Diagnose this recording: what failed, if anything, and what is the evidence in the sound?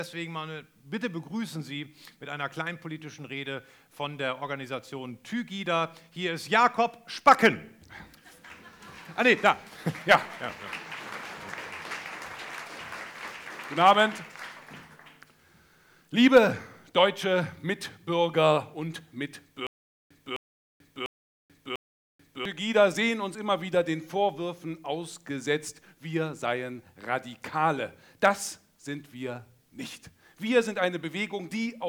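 From 19.67 to 22.45 s the playback stage shows a stutter with silent gaps: a 259 ms fragment repeats four times, each followed by 437 ms of digital silence, cycling every 696 ms. On a waveform this appears as identical short blocks separated by flat lines, and on a spectrogram as matching vertical slices with empty columns between them. The likely cause is a stalled player or stream that replays its last buffered fragment on each retry, so the audio due in that span is lost.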